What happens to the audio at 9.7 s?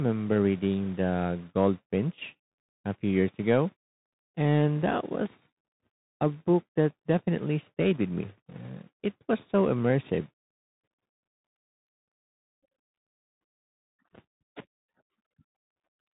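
At 9.7 s the speech carries the Bluetooth CVSD headset codec damage heard across the whole clip. CVSD encodes one bit per sample, saying only up or down, with an adaptive step, which fits a 64 kbps stream. Nothing passes above about 3.8 kHz, loud high sounds outrun the step and distort, and s sounds turn scratchy over a granular hiss. A plain low-pass filter would dull the sound cleanly; here the grit and slope distortion are what mark CVSD.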